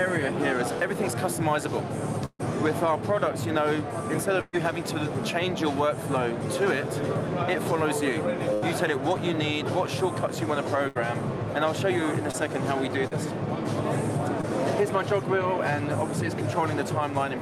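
Four times the sound stalls into a held, fading continuation before jumping ahead: at 2.25 to 2.41 s, 4.41 to 4.55 s, 8.54 to 8.64 s and 10.88 to 10.97 s. The first two trail off into brief silence, about 50 ms and 10 ms, before the audio returns. These are bursts of packet loss. Runs of about 140, 120, 80 and 80 ms never arrived in time. The receiver stretched the last sound and faded it, then resumed later in the stream with that stretch lost.

Later, three much briefer smears or wobbles pass at 12.31 to 12.35 s, 13.07 to 13.13 s and 14.41 to 14.45 s. Each is short concealed packet loss. About 20, 40 and 20 ms went missing, and the decoder bridged each hole by extending what came before and blending back into the real audio. The result is a momentary blur rather than an audible gap.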